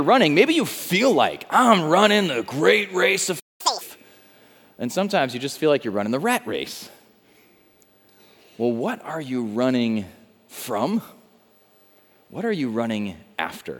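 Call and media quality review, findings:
Playback stall, 3.39–3.61 s: sound cuts out for about 0.2 s mid-flow. Likely the player buffer ran dry or its thread got blocked.

Catch-up at higher speed, 3.61–3.81 s: resumes at 2x speed, pitch up around ten semitones. Player resampling to burn off the backlog, then drops back to normal.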